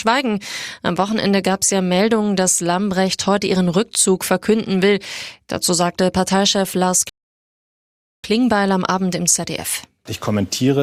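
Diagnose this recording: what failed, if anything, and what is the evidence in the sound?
At 7.09 s the speech drops abruptly into silence, and at 8.24 s it picks up again at exactly the point where it broke off, with nothing skipped or repeated. That is a rebuffering stall at the playback stage. The player drained its store of downloaded audio, halted until more data arrived, then carried on. No content is missing, but the recording runs about 1.15 s longer than the original because of the inserted gap.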